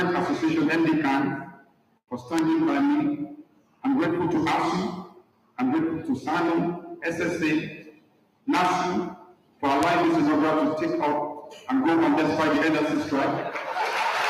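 At 2.39, 8.65, 9.83 and 13.93 s a bit error spike cuts through the audio: a flipped bit throws a sample value off by a power of two before it snaps back. Each is heard as a single sharp tick unrelated to the surrounding sound, loudest at 2.39 and 9.83 s (peaks about −8 dBFS) and softer at 8.65 and 13.93 s (about −20 dBFS). The waveform shows a needle-thin spike; the spectrogram shows a vertical line spanning all frequencies.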